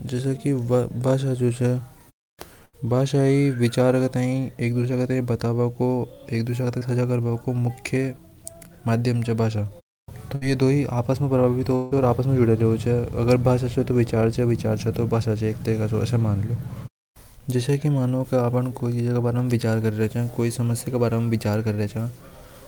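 A speech recording with four network-related gaps. Two are bursts of packet loss, at 2.65 to 2.75 s and at 10.35 to 10.43 s, the second just before "ये दी". In each, the receiver carried the last sound forward and faded it, for 75 ms and then 64 ms, while about 80 ms and 60 ms of real audio never returned. On a spectrogram this shows as a band of smeared, continued sound that dims and then cuts to fresh material. In the waveform it looks like a short, shrinking stretch before a jump. At 6.79 to 6.83 s there is a short concealed packet loss. About 20 ms went missing and was bridged by 21 ms of synthesised continuation, which is heard as a tiny smear or wobble. It appears as a sliver of blurred spectral texture with a seam in the waveform. From 11.75 to 11.93 s the sound holds as a decaying buzz or hiss for about 156 ms, with no silence after it, and about 160 ms of the audio is lost. This is likely a long network dropout. 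A spectrogram shows the extended, fading smear of the held sound, and the waveform shows a steadily shrinking stretch before normal speech resumes.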